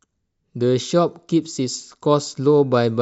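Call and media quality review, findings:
No audible defects found in the speech recording; nothing to escalate.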